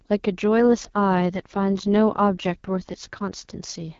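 At 0.59 s an AMR rate drop sets in and lasts until 3.58 s. The speech turns rough and synthetic, which fits the AMR-WB codec stepping down from 12.65 to 6.6 kbit/s. The band stays unchanged and no gap appears.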